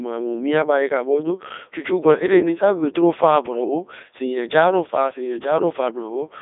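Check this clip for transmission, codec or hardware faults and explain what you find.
One codec fault runs through the whole speech clip: Codec 2 vocoder damage, and it is heavy. The audio sits in a telephone-style band of 300 Hz to 3.7 kHz with nothing above 3.8 kHz, and the detail fits Codec 2's 3.2 kbit/s mode. Only pitch, voicing, energy and a spectral envelope survive. The decoder rebuilds the speech from sine waves, which gives it a robotic buzz. A waveform codec smears or swirls the original signal, but here that waveform is gone entirely.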